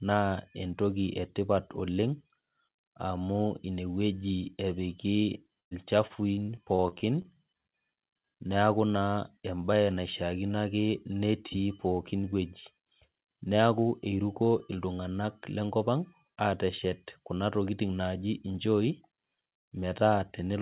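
From 5.6 to 7.27 s, packets were repeatedly lost or late, causing repeated packet loss (robotic sound). About a dozen holes, the longest 110 ms, were patched by stretching the preceding sound, so nearly a quarter of that span is concealed, leaving the speech choppy. The call path's band stopping at 4 kHz fits narrowband G.711.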